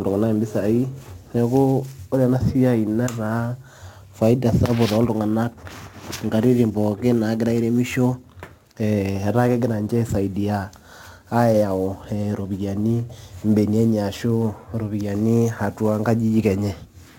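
Sample clock jitter runs throughout this speech recording, with timing wobble on the order of 10 microseconds. Each sample lands slightly off time, so steep, loud and bright passages pick up a hiss-like roughness roughly 30 dB down that drops away in pauses.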